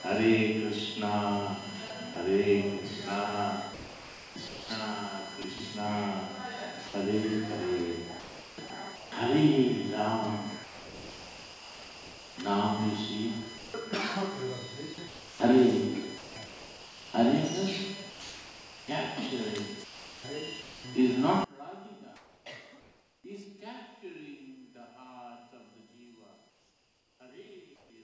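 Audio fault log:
Throughout: USB whine. There's a steady fixed-pitch whine on a 1 kHz fundamental, loudest at its 3 kHz harmonic, sitting about 20 dB under the sound. The pattern fits USB power draw in 1 ms frames bleeding into the audio through a shared power or ground path. It stays at the same pitch the whole time, well inside the call path's band, which carries nothing above 8 kHz.
1.88–2.16 s, 3.74–9.12 s, 10.64–20.84 s: sound chopped by the voice detector. In each stretch the sender's voice detector is likely flipping between sending and muting, so pieces of the sound get swapped for synthetic fill. That's roughly 40 ms in the first stretch, 1.5 s in the second and 4.52 s in the third. It comes across as choppy, with clipped edges.
21.44 s to the end: one channel inverted. From here one stereo channel is likely running with reversed polarity. Summed to mono, everything the two sides share cancels, and the level drops by about 24 dB. 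Shared material mostly disappears, leaving only a faint residue made of whatever differs between left and right.
22.16–23.24 s, 26.50–27.90 s: comfort noise in place of the background. In these pauses the real background is gone, about 740 ms in the first and 840 ms in the second. A smoother noise stands in for it, likely generated by the receiver as comfort noise while the sender's discontinuous transmission had stopped sending audio. The detail of the real background drops out until the sound resumes.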